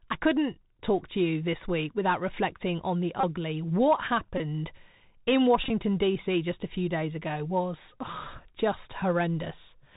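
Throughout, the speech sounds narrow, scratchy on s sounds, with a granular hiss beneath: the Bluetooth CVSD headset codec at 64 kbps, cutting everything above 4 kHz and distorting loud highs.

At 3.21 s, 4.38 s and 5.64 to 5.71 s a brief buzz near 267 Hz appears, lasting about 26 ms, 22 ms and 45 ms scattered over 60 ms (longest run around 15 ms), followed by a single tick at 8.38 s. This is Bluetooth headset packet repetition: lost voice packets were replaced by the previous packet's bits.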